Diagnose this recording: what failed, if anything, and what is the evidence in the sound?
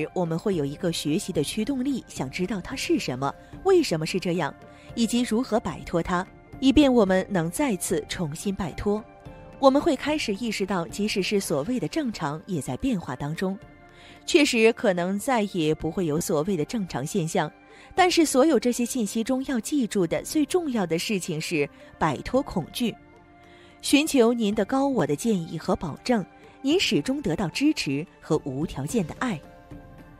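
The driver or buffer stage hiccupped with a repeated buffer twice: a tiny stutter-click at 16.18 to 16.21 s and another at 25.00 s. Each is an 11.6 ms chunk, which fits a 512-sample buffer, replayed two and then one extra time because fresh audio arrived late.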